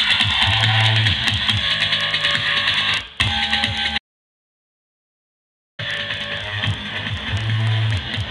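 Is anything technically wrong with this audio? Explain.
Yes. There is an audio dropout to silence from 3.98 s to 5.79 s. The sound cuts off mid-flow and returns just as abruptly, about 1.81 s later. The gap is silent, with no room tone underneath. That points to the input being lost while the recorder kept writing silence. A disconnected device, failed link or stray mute is the likely cause. Whatever sounded during that stretch is simply missing.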